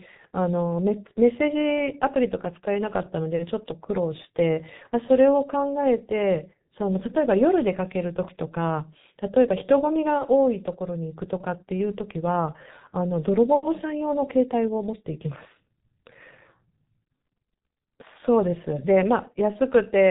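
For the whole clip, the speech carries heavy G.723.1 codec damage: the sound suggests a very low rate near 6 kbit/s, nothing survives above 3.8 kHz, and the slowly updated voice model in long frames leaves the speech muffled and hoarse, with consonants smeared together.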